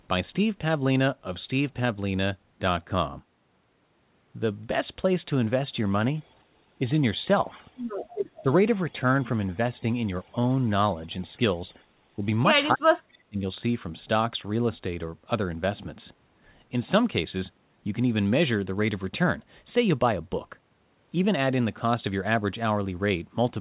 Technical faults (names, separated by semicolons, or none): echo leak; speech suppressed in double talk